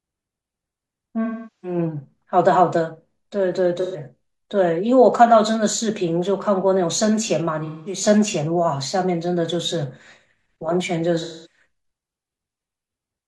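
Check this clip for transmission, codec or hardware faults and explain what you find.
AAC frame loss with concealment occurs in this speech at 1.24–1.78, 3.81–4.02, 7.65–8.01 and 11.23–11.59 s. The decoder repeats the last good spectrum to cover each gap, so it sounds smeared and phasey rather than cutting to silence.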